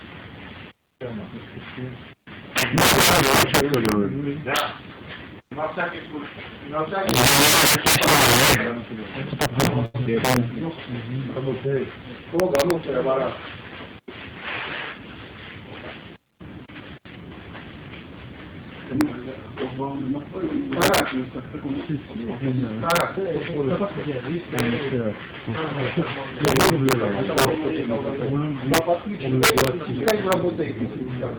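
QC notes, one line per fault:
Throughout, integer overflow: the signal is driven about 21 dB past full scale, and instead of being limited, each peak over the ceiling wraps to the opposite sign and jumps across the whole range. Around two percent of samples land over the limit, so the loudest moments break into violent, sharp cracks, far harsher and more abrupt than ordinary clipping, while quieter passages pass through intact.
9.85 to 9.96 s, short stall from a late packet: a packet arrived late, the jitter buffer ran dry, and the receiver held the last sound for 87 ms until the packet turned up, then carried on from the same point. Nothing is lost, but the sound hangs unnaturally long with a faint buzzy, flattened quality, and everything after it sits 87 ms later than before.
10.04 to 10.13 s, short concealed packet loss: 20 ms of audio never reached the decoder in time. The receiver papered over the gap by extending the preceding sound for 12 ms and then crossfading back into the real signal, so the hole is heard as a brief smear or slight wobble rather than a clean dropout. 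The net result is about ten milliseconds of extra, synthetic material.
16.17 to 17.01 s, jitter buffer speed-up: with more audio queued than its target, as after a burst of delayed packets, the receiver trimmed short pitch-period-sized slices repeatedly to shed latency. Playback runs at 105% speed for this stretch, removing about 50 ms in total. Pitch stays unchanged, but the sound comes across slightly hurried and its timing compressed.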